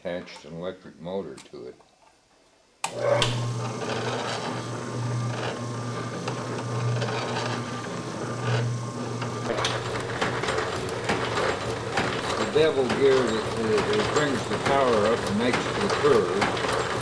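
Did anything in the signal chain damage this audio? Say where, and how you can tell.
No, nothing in the chain audibly damaged this audio.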